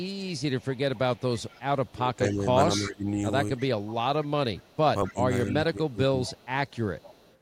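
Speech with two recurring faults. Echo leak: a delayed copy of the voice trails it by 239 ms at 0.0–2.33, 2.74–2.91, 3.57–5.14, 5.48–5.54 and 6.25–7.36 s. It sits about 15 to 30 dB below the speech and is loudest near 2.8 s. The likely cause is a far-end echo canceller letting loudspeaker sound back into its microphone. Speech suppressed in double talk: the voice dips at 1.92–3.16 s by about 10 dB, and at 5.12–6.29 s by about 20 dB. This is likely the canceller turning everything down while both sides spoke at once.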